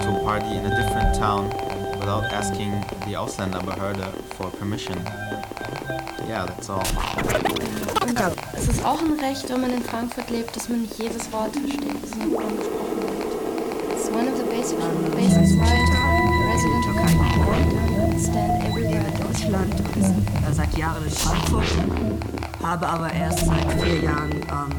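Single sharp clicks at 9.40 s and 18.32 s, likely dropped samples: a fraction of a millisecond lost, too brief to leave any audible gap, unlike a dropout.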